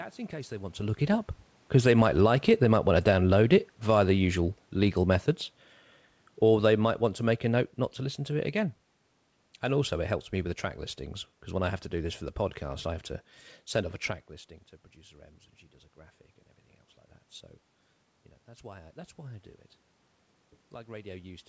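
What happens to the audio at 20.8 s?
Nothing goes wrong at 20.8 s; the audio plays through that moment intact, with no dropout, glitch or other fault.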